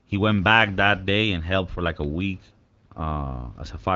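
Listening through this speech, nothing stood out as a fault at any point.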